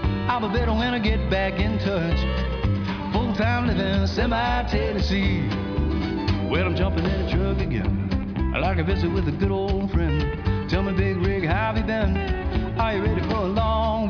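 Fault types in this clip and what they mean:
No faults detected anywhere in the audio.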